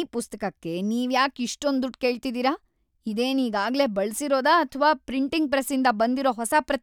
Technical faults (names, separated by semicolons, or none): none